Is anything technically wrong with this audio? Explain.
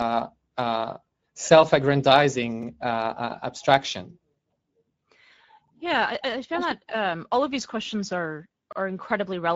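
Yes. Two faults are audible.

Speex codec damage runs through the whole clip. This CELP codec has too few bits to model the excitation, which fits a middle setting near 17 kbps. The speech sounds noisy and hoarse.

Overlapping chunks cause stutters at 2.63 to 2.68 s and 8.73 to 8.77 s, the second just after "of these questions are". The audio was handled in 3 s chunks, each starting 48 ms early. That stretch plays twice, heard as a brief click-like stutter.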